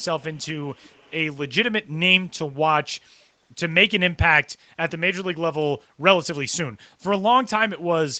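Probably an echo leak: a far-end canceller likely let loudspeaker pickup return, so a very faint copy of the speech trails about 230 ms behind at 0.0 s and 0.2–0.48 s, then about 270 ms behind at 0.64–1.12 s, some 35–40 dB down.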